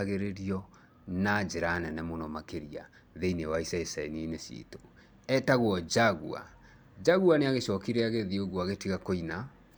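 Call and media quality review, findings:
No technical faults found in the speech signal; level, continuity and timing hold steady throughout, with nothing to attribute to the capture, transport or playback chain.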